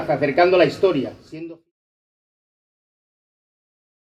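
No technical faults can be heard in this audio. A smooth fade-out, beginning at around half a second, brings the level down gradually without any click or hard edge and finishes at 1.72 s.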